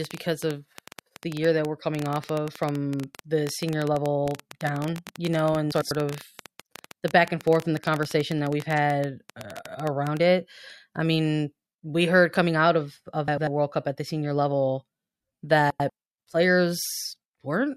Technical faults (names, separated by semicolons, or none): train of clicks; frames out of order